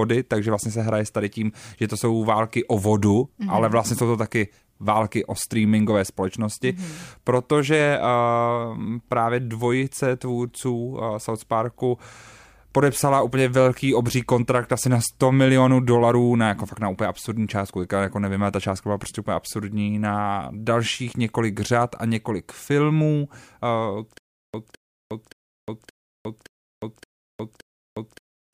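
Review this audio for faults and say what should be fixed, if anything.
From 24.18 s to the end of the speech clip there is a stutter with silent gaps: a 0.21 s burst of audio repeats seven times at a steady 0.57 s period, each repeat followed by about 0.36 s of digital silence. This is most likely a stalled player or stream that replays its last buffered fragment on each retry and then runs dry, so the audio that belonged in those final seconds is missing. Prevent it by giving the playback or streaming path enough buffering and recovery to resume cleanly instead of looping stale data.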